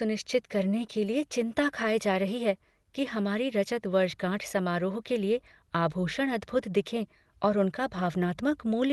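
No technical faults are audible.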